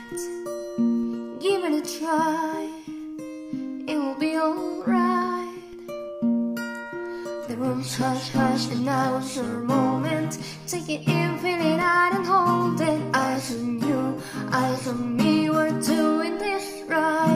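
At 1.03 s the waveform's zero line jumps. This is a DC step. The whole signal shifts off centre by about -37 dBFS. It is heard as a low thump. A 20 Hz high-pass then pulls the offset back towards zero, so it fades rather than holds. The same DC step returns at 5.73 s, with the same size and the same decay. Each time, the sound itself carries on unchanged.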